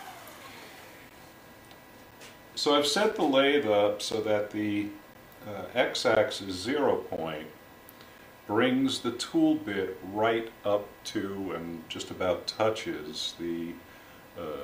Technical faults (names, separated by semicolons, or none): gap between stream segments